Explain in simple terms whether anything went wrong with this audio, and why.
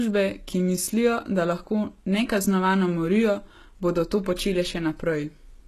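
Something went wrong throughout the whole clip. The speech has nothing above about 12.3 kHz. This is likely low-bitrate audio saved at a high bitrate. The second save was larger but couldn't bring back the detail the first one lost.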